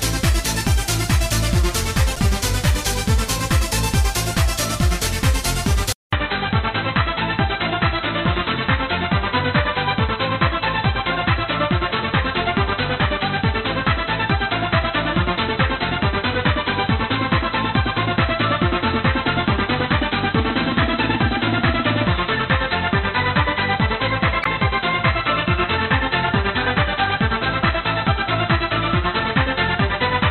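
The audio has two kinds of fault. At 2.13 to 2.18 s and again at 24.41 to 24.47 s there's a short glitch from damaged data in a compressed stream. A chunk of the encoded data got corrupted, so the decoder misread those frames, lost its place and had to hunt for the next valid frame header before playing cleanly again. That's why each glitch lasts only about 50 ms. At 5.93 s things change for the rest of the clip. After a short gap of about 200 ms the sound comes back dull and boxy, with nothing above 4 kHz, a new layer of background noise sitting well below the signal, and the loudness roughly unchanged. That's most likely the input switching to a poorer device, such as a different mic or a headset in its call mode, which passes a narrower band and brings its own noise floor.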